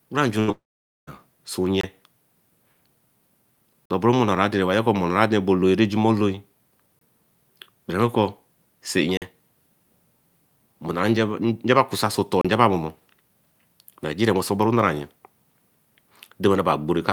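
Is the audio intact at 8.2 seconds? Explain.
Yes, the speech at 8.2 seconds is intact, with no fault at that moment.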